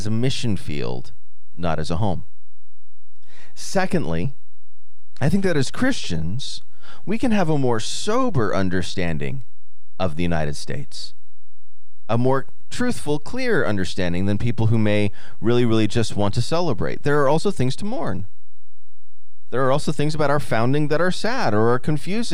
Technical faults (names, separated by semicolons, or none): DC offset